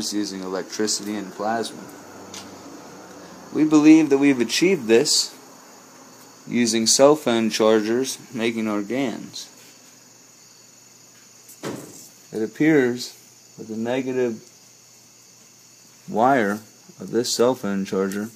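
No technical faults found in the sound; nothing to flag.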